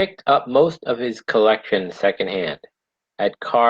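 From 1.68 s, right after "up most of his", the speech turns rougher and duller to the end, with the top end dropping from 20 kHz to 12 kHz. This is a call bitrate drop: the encoder coded more coarsely for about 1.5 s, consistent with a fall from 32 to 16 kbps.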